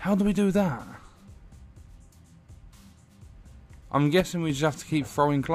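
At 4.20 s the whole sound, background included, drops by about 5 dB until 4.50 s: a sudden gain jump, likely a gain setting applied with no ramp.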